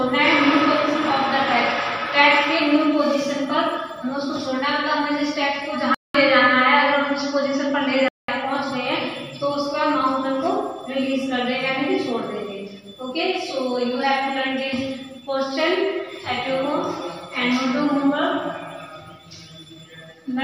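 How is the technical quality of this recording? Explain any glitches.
The recording has one clear glitch. From 5.94 s to 8.28 s the sound turns dull and boxy, opening with a gap of about 200 ms. Nothing survives above 7.6 kHz, the level shifts by roughly 5 dB, and a new background noise sits around 40 dB below the signal. This is likely an input switched to a poorer device, a narrower-band microphone or headset profile with its own tone and noise, before the original input returns.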